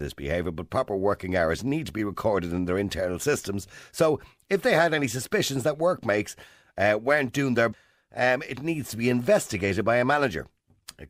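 Damaged data in a compressed stream appears at 7.70 to 7.74 s, right after "uh weren't doing their" and before "um it needs to". For about 40 ms the speech breaks up in a brief glitch. A corrupted stretch of the compressed data left the decoder unable to parse those frames correctly, so it lost sync and resumed only once it found the next valid frame header.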